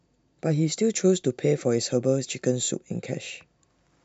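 Pre-emphasis left on, from 0.72 to 2.72 s: the speech takes on a treble lift that was meant to be undone on playback but never was. The high end sits about 8 dB above the midrange at 10 kHz compared with 1 kHz, a shape that fits the CD 50/15 µs emphasis curve. Through this stretch the voice turns thin and glassy, with sibilants hissing forward and the body of the sound pushed back.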